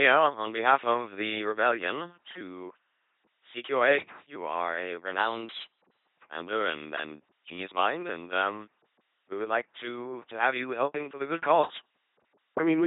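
From start to finish the speech has the buzzing, mechanical robot quality of an LPC-10 vocoder at 2.4 kbit/s, with heavy codec damage. A ten-pole filter stands in for the vocal tract, and each stretch is excited either by a pulse train or by noise, so some syllables buzz and others dissolve into hiss. On a spectrogram, nothing appears above 3.8 kHz. Voiced parts show rigidly even harmonic stripes, and unvoiced parts show smeared noise blocks with hard edges between the two states.

After "are a", from 5.20 to 6.07 s, the audio runs about 5.6% fast and sits roughly 94 cents sharp, close to a semitone, before snapping back in time for "commander and and genius". A sudden step in both speed and pitch that then reverses most likely comes from a drift correction step, where clock-matching software briefly changed the playback rate. On a spectrogram the harmonic stripes jump upward for that stretch, and the waveform's periods visibly shorten.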